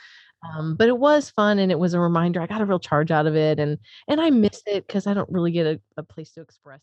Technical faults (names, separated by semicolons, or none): none